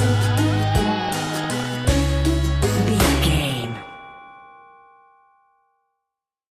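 Short blips of noise break over the audio from 0.96 to 1.87 s and again from 3.37 to 3.91 s. This is DAB burbling: weak reception lets bit errors slip past error correction, corrupting sub-band levels frame by frame.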